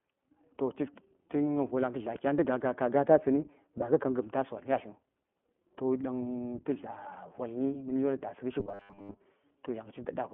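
The whole clip runs through the iLBC codec, and you can plainly hear it. Each 20 ms frame is coded on its own, nothing gets through above 4 kHz, and the speech comes out slightly rough and synthetic, which points to the 15.2 kbps mode on a 200 Hz to 3.4 kHz phone line.

From 8.60 to 9.21 s the speech collapses into a stiff, metallic buzz at 100 Hz that only loosely follows the syllables. That's robotic sound, likely from repeated short buffers: most of the audio there is the last short chunk looping while fresh data is skipped, which fits a 10 ms buffer.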